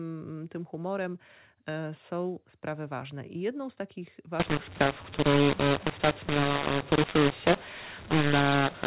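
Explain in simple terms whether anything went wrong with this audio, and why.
After "I jedną z takich" at 4.40 s, the speech turns harsh, with noise filling pauses: a mu-law and A-law mix-up, A-law phone audio read as mu-law.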